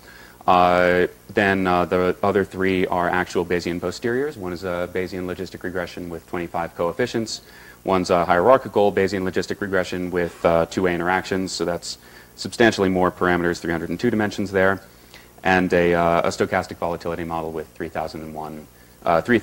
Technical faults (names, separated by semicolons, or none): none